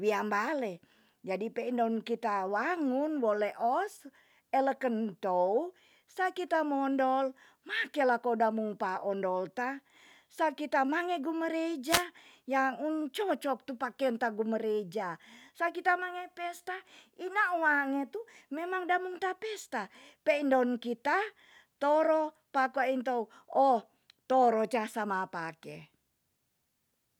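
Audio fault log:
11.84–12.06 s, wireless microphone noise hit: the radio link from the FM microphone fades, so receiver noise swells into a burst of static lasting about 0.2 s just before "ya un".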